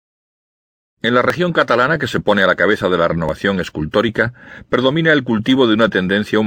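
At 1.30 s, 3.29 s and 5.28 s the speech hits a tiny skip. That's overlap between stream segments: the segments are 2 s long, and where the time stamps of neighbouring ones overlapped, the player trimmed the overlap off audio that wasn't actually doubled. So roughly 13 ms, 14 ms and 8 ms simply vanish, the waveform jumps across the gap, and you get that evenly spaced skip every two seconds.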